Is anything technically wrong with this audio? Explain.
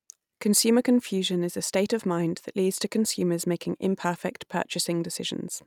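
No, nothing is technically wrong with this audio.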